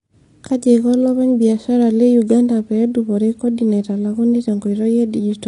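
Throughout, likely AAC compression at a low bitrate, fitting about 32 kbps, cuts everything above 10.6 kHz, leaving the speech dull, smeared and fizzy on sibilants.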